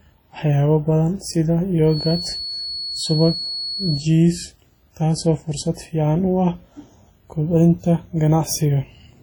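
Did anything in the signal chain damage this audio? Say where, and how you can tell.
Yes. Throughout, the speech sounds heavily washy and ringing, with hiss breathing alongside it and nothing above 19.8 kHz. This is likely WMA compression at the codec stage, which fits a low bitrate around 32 kbps.

From 1.85 to 4.09 s, a steady 4.4 kHz feedback whistle sits roughly 10 dB under the speech. A loudspeaker-to-microphone loop likely hovered just short of howling.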